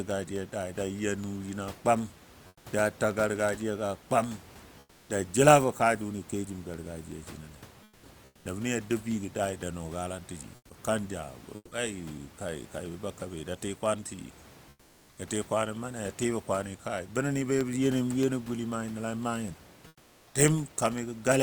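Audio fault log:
2.47–2.65, 4.79–5.09, 7.83–8.03, 8.25–8.45, 10.55–10.69, 14.69–15.17 and 19.87–20.33 s, comfort noise in place of the background: in these pauses, lasting 140 to 480 ms, the room noise that sits about 26 to 30 dB under the speech turns into a smooth, featureless hiss about 3 to 6 dB quieter. That's likely discontinuous transmission in an Opus-style codec. The sender goes quiet when it hears no speech, and the receiver fills the pause with synthetic noise that only roughly matches the real background.
11.55–11.71 s, sound dropped by the voice detector: for 160 ms the speech gives way to that same flat synthetic noise, and about 60 ms of actual speech goes missing before it picks up again. The likely cause is the sender's voice detector deciding a stretch of speech was just background and cutting transmission. The receiver then played comfort noise until the detector triggered again.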